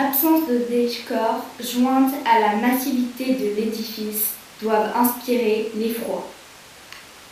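No technical faults can be heard anywhere in this speech recording.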